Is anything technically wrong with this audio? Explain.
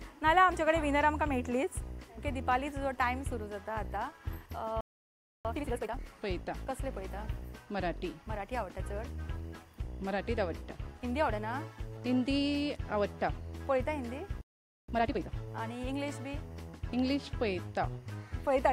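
Yes. Linear timecode from a neighbouring track or cable is leaking into the audio for the whole clip: timecode bleed. The code is a square wave flipping between tones near 1 and 2 kHz, at a rate that fits 24-frame timecode. It sits roughly 35 dB below the sound as a faint, steady chirping warble.

Twice the player most likely ran short of data or had its thread blocked, so output went silent: a playback stall. The sound cuts off mid-flow at 4.81 s for 0.64 s, resuming at 5.45 s, and again at 14.41 s for 0.47 s, resuming at 14.88 s.

Straight after each stall, the player clears its backlog by trimming small pieces and cross-fading the joins. This is time-compressed catch-up. From 5.45 to 6.09 s and from 14.88 to 15.34 s, the audio runs at twice normal speed while keeping its pitch, sounding hurried.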